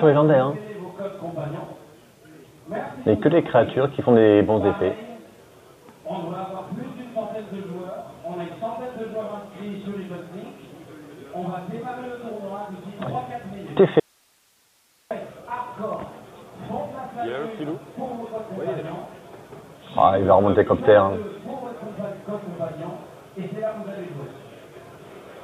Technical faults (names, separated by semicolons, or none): audio dropout to a faint residue